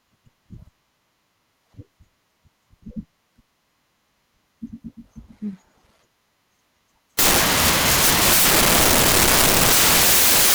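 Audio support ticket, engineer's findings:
Samples built from the wrong bytes, 7.19 s to end of clip (10.54 s). Speech abruptly replaced by loud, harsh broadband noise, close to white on loud passages. Sample reader or decoder misassembling bytes (offset, swapped order or misalignment), so fast-changing low bits dominate each value.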